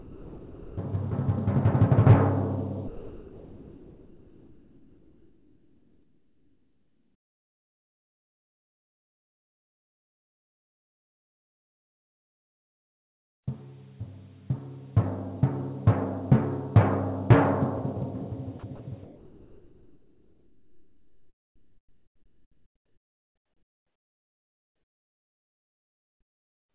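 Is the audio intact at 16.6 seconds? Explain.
Yes, at 16.6 seconds the audio is intact, with no dropout, click or distortion, only the narrowband call sound of a G.711 A-law path with nothing above 4 kHz.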